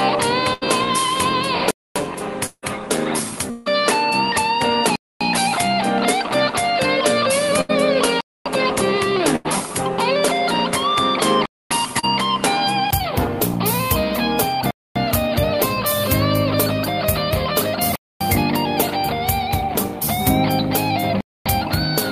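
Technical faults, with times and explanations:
0.00 to 12.93 s, input switched to a poorer device: the sound is boxier and duller, with nothing above 11.4 kHz and a noise floor about 35 dB below the signal. The likely cause is a lower-grade microphone or headset profile. A 20 ms silence at 12.93 s marks the return to full band. On a spectrogram, a flat ceiling at 11.4 kHz ends abruptly there.
0.53 to 0.63 s, 7.61 to 7.71 s and 9.36 to 9.46 s, burst of packet loss: each time about 80 ms of audio is missing. The receiver stretches the last sound into a fading buzz or hiss, then jumps ahead. On a spectrogram these show as smeared, flattening harmonics that end in a hard seam.
1.71, 4.96, 8.21, 11.46, 14.71, 17.96 and 21.21 s, gap between chunks: a 250 ms hole recurs after every 3 s chunk. Nothing is lost, but the sound is chopped. The waveform shows flat, hard-edged blanks, and a spectrogram shows clean vertical stripes at fixed spacing.
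2.46 to 2.64 s and 3.50 to 3.68 s, long network dropout: about 160 ms vanishes each time, likely because nothing arrived from the network. Concealment fills most of the gap with a decaying continuation. At 2.46 s this leaves a 50 ms true silence. On a spectrogram these look like fading smears with a time skip.
11.99 to 12.05 s, short concealed packet loss: about 40 ms is missing, patched by extrapolating the preceding sound and blending back. It is heard as a brief smear or wobble. On a spectrogram it shows as a tiny blurred patch with frozen detail.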